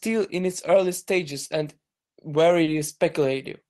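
Right around 0.74 to 0.76 s there's a quick bit of hard clipping. A peak in the speech ran only about 1 dB past what one stage in the chain could pass, so its top got sliced flat for a moment. Those squared-off edges throw harmonics up high, and because the overload is so slight you hear it as a tiny crackle on that one loud spot rather than any sustained fuzz.

Later, from 2.63 to 2.70 s, there's short concealed packet loss. About 40 ms of audio never made it to the decoder in time, so the receiver papered over the gap by extending the last bit of sound it had and then easing back into the real signal. It comes across as a brief smear or wobble, and a short consonant in that stretch could get swallowed. The top end, which stops around 12 kHz, fits an Opus call link running near 24 kbps.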